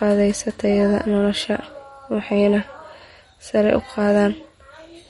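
Throughout the speech, the audio has likely passed through MP3 compression at a bit-starved rate that fits around 45 kbps. The encoder removed everything above 11.1 kHz and dropped weak frequency detail frame by frame, giving a dull top end and plainly audible watery, swirling artefacts.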